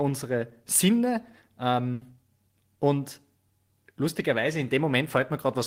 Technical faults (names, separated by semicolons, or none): burst of packet loss